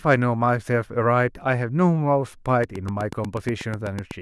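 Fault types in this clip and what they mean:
Train of clicks: about fifteen evenly spaced clicks at 8.1 per second, peaking about 5 dB over the speech; steady pacing distinguishes it from random crackle.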